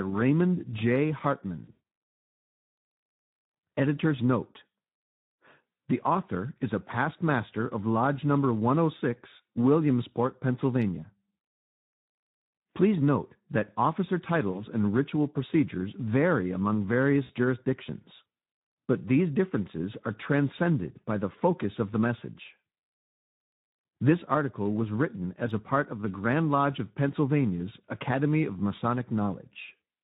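The Speex codec, running at about 11 kbps, has too few bits to describe the excitation, so the speech sounds noisy and hoarse throughout, with plainly audible codec damage and only a hissy, noise-like fill in the highest frequencies.

VoIP packet loss concealed by the speech codec strikes three times. From 1.63 to 1.77 s, about 160 ms of audio is lost across a 200 ms stretch, including one 120 ms gap. The decoder stretches its last sound into a fading tone or noise that stays weak after packets resume. A shorter gap of about 40 ms comes at 14.51 to 14.60 s, between "note that officer" and "and ritual procedures vary". Another gap of about 60 ms comes at 17.23 to 17.31 s, just after "ritual procedures vary among". Both leave brief smeared dropouts.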